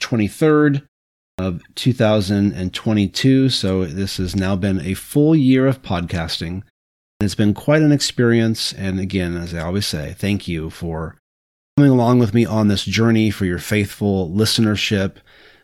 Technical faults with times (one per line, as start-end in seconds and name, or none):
1.31-1.39 clipped start after a pause
7.14-7.21 clipped start after a pause
11.70-11.78 clipped start after a pause